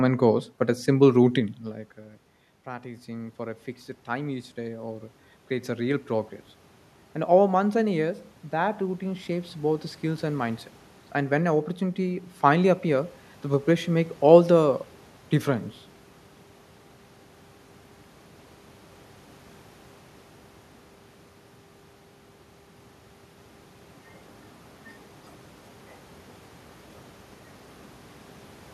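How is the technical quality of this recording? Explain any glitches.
The recording has two audible glitches, both from automatic gain rising. From 1.58 to 6.38 s, after the talker moves away from the microphone at around 1.5 s and the level drops by about 20 dB, the voice and the room noise swell upward together by about 10 dB. From 7.58 to 12.32 s a second, gentler swell of about 6 dB follows. In each case the gain control hears a quiet input and slowly turns itself up over several seconds, lifting the background along with the voice.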